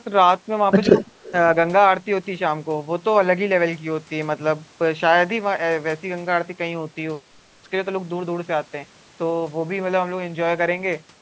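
From 0.84 to 1.03 s a faint delayed copy of the speech sits behind the talker, trailing by 132 ms and about 25 dB below the direct signal. This is echo leak: the far end is likely playing the call over a loudspeaker, and its echo canceller let part of that playback back into the microphone.

Inside that window, between 0.87 and 0.95 s, the talker's own level dips by around 10 dB for well under a tenth of a second. This is speech suppressed in double talk. With both directions active, the canceller likely could not separate the local talker from the returning echo and attenuated both, so the voice briefly sinks.

The echo leak returns from 1.23 to 1.32 s with the same 132 ms lag and the same low level, heard again as a short, faint trailing copy beneath the speech.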